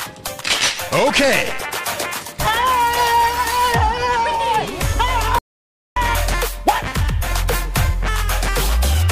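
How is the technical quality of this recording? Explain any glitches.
There is one clear glitch: an audio dropout to silence. From 5.39 to 5.96 s, about 576 ms of sound vanishes into silence, likely because the input link was lost. The waveform is a flat line and the spectrogram a blank band, with no room tone.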